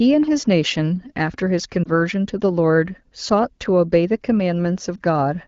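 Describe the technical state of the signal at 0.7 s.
At 0.7 s the signal is intact, with no fault present at that moment, the speech carried cleanly through the AMR wideband (HD Voice) codec at 12.65 kbit/s.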